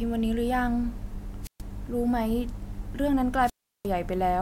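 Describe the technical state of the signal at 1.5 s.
At 1.5 s the speech is caught in a wireless microphone squelch dropout running from 1.42 to 1.62 s. The radio link from an analogue FM microphone weakens. The receiver's squelch then shuts the output rather than pass raw static. A short swell of hiss comes first. Then there is a hole of near silence lasting about 130 ms. The speech returns as the carrier recovers.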